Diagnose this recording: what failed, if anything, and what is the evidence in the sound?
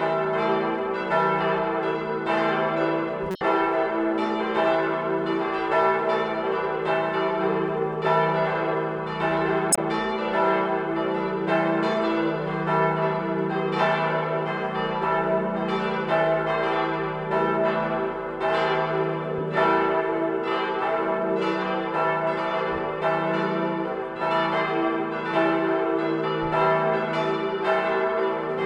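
The codec stage failed. A corrupt frame was decoded twice. Short bursts of misplaced energy sound like brief chirps or blips. They span 3.31 to 3.41 s and 9.71 to 9.81 s, each about 0.1 s long. That fits a few consecutive frames. The first peaks near about -15 dBFS. The second is louder, near about -5 dBFS. Damaged bits corrupted gains or spectral codes, and the decoder played those frames anyway, putting energy at wrong frequencies.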